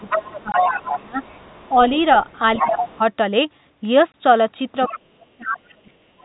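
From 0.0 to 1.21 s the talker's level sinks and breaks up, at worst about 20 dB down, over roughly a second in total. This is speech suppressed in double talk, likely because the echo canceller could not tell the near voice from the loudspeaker signal while both sides were active, so it attenuated everything. The same pattern returns at 2.6 to 3.0 s, dipping about 15 dB across some 0.4 s, and again from 4.94 s to the end at 6.24 s, where the voice falls as much as about 35 dB, affecting roughly a second in total.

Overlapping the first dip, from 0.07 to 1.03 s, a second voice sits only about 5 dB below the talker. This is the other side's voice leaking through, likely residual echo the canceller failed to subtract from the microphone pickup. Fainter leakage follows at 1.22 to 1.73 s (about 30 dB down) and 1.96 to 2.39 s (about 25 dB down). A strong burst at 2.56 to 2.98 s, again about 5 dB under the speech, coincides with the second suppression. 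A brief scrap at 4.86 to 4.98 s, about 15 dB down, leads into the last one.

Two hard gaps mark packet loss filled with silence, at 0.52 to 0.54 s and 4.12 to 4.14 s. Each is a 20 ms hole, consistent with a single lost packet that the receiver replaced with silence. The edges are abrupt rather than a smooth fade.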